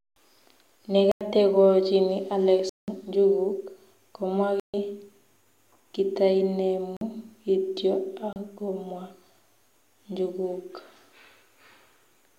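Blocks of samples were zeroed, which points to the output buffer not being filled in time. Each block of digital silence cuts in and out with no fade: 1.12–1.21 s, 2.69–2.88 s just before "njuguk komwa", 4.60–4.74 s after "njuguk komwa", 6.97–7.01 s, and 8.33–8.36 s. At 31 to 186 ms, the longer gaps are audible holes and the shortest are pops. The 93 ms gap fits a 4096-sample block.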